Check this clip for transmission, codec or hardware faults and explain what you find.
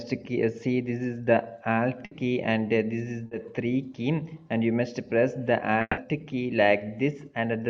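Three transmission faults appear, all from audio failing to arrive in time, with the receiver patching over each gap.

From 2.05 to 2.13 s there is a burst of packet loss. Several consecutive packets went missing, and the receiver extended the last sound for about 60 ms while lowering its level, so a held buzz or hiss stands in for the lost material. When real audio resumes, roughly 60 ms has been skipped. On a spectrogram the harmonics or noise band freeze into flat horizontal streaks that fade out, then the pattern jumps abruptly. The waveform shows a repetitive, decaying envelope.

At 3.27 to 3.33 s there is a short concealed packet loss. About 40 ms never reached the decoder, so the receiver synthesised a continuation from the preceding pitch or noise shape and crossfaded back into the real signal. The result is a brief smear or wobble, and a quick transient can vanish. On a spectrogram it appears as a narrow, slightly blurred vertical strip where fine detail goes soft. 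The waveform shows a few overly regular cycles.

Between 5.81 and 5.99 s the audio breaks up. A fading buzz or hiss runs for about 160 ms, followed by about 30 ms of silence, before the signal returns with roughly 160 ms missing. This is likely a long network dropout, where nothing arrived for long enough that concealment gave up and muted. On a spectrogram a smeared, decaying band ends in an empty gap. The waveform tapers to a flat line.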